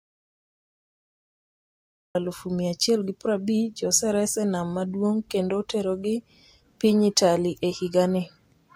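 Right from the top, the first 2.15 s are pure silence, an audio dropout to silence that's already under way when the clip begins. There's no room tone at all, just silence, and then the speech appears abruptly at 2.15 s, seemingly mid-flow. That pattern most likely means the input feed was lost for a moment, from a disconnected device, a dropped link or a mute, while the recorder kept writing. Whatever was said before 2.15 s is simply gone.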